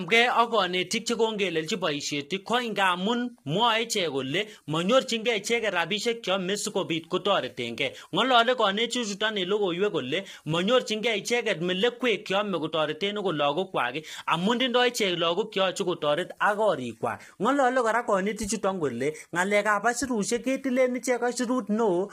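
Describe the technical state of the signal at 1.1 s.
At 1.1 s the speech carries low-delay AAC compression, and it runs through the whole clip rather than starting here. The voice sounds rough and grainy. Noise fills the gaps between the pitch harmonics, and the top band sounds thinned and synthetic. The damage is heavy. The likely cause is AAC-ELD coding at a low rate, consistent with about 24 kbps. Its short frames separate harmonics poorly, and at this low rate bits run short.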